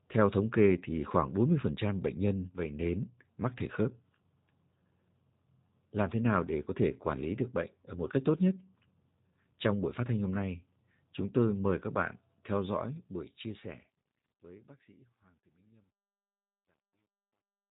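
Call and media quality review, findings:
G.729 codec, whole clip: speech band-limited, rough and slightly synthetic, codec damage plainly audible. 8 kbit/s CELP rebuilding each 10 ms frame from filter, pitch and sparse pulses. Spectrogram: hard ceiling at 4 kHz, empty above, smeared harmonics.

Truncation distortion on a fade, 12.6 to 17.7 s, starting just after "mời các bạn theo": the fade-out, beginning near 12.6 s, turns gritty, worst from 14.4 to 17.7 s. Undithered gain stage, consistent with an 11-bit word length. Waveform: square stair-steps.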